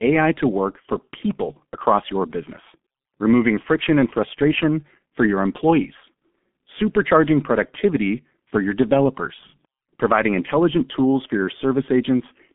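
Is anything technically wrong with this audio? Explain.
Yes. Throughout the speech, the G.723.1 codec is audible. Nothing reaches above 3.7 kHz, and the line band sits around 200 Hz to 3.5 kHz. At about 6.3 kbit/s, with 30 ms frames and a slowly updated voice model, damage is heavy. The voice sounds muffled and hoarse, and consonants blur.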